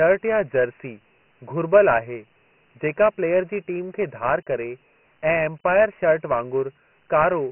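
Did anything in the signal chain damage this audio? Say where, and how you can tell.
Yes, at the codec stage: Dialogic VOX ADPCM throughout. A spectrogram shows a hard ceiling at 3 kHz, and heavy gritty hiss rides the speech envelope, which fits 24 kbps 4-bit coding.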